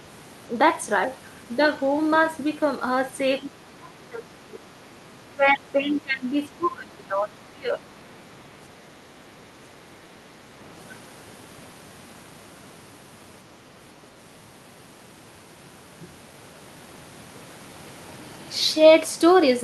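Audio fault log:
3.41–3.50 s and 8.00–8.05 s: other side's voice leaking through. Brief scraps of a second voice appear. The first sits about 15 dB below the talker, the second much fainter, near 35 dB down. Likely loudspeaker echo the canceller did not fully remove.
3.53–4.73 s, 5.29–7.34 s, 7.52–7.82 s: speech suppressed in double talk. The talker's level dips by up to about 20 dB, in pieces, for roughly a second, a second and a half, then a fraction of a second. Likely the canceller turning the talker down along with the echo during overlap.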